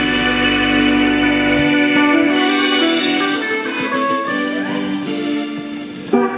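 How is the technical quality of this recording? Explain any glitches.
The technical quality holds up, with no glitches to explain.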